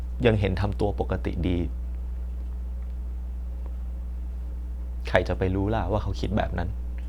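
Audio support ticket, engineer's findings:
Mains hum, present for the full clip. A steady 60 Hz tone sits under the speech at a strong level, only a few dB below it. The hum points to power-line coupling into the signal path, from a ground loop between connected equipment or a transformer close to cabling or the input stage. Check grounding and cable routing.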